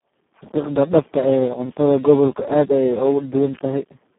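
From start to finish the speech sounds hoarse, buzzy and close to robotic, squeezed into a narrow telephone band of roughly 150 Hz to 3.4 kHz with nothing above 3.9 kHz. This is heavy Speex codec damage, consistent with a setting near 4 kbps that starves the excitation of bits.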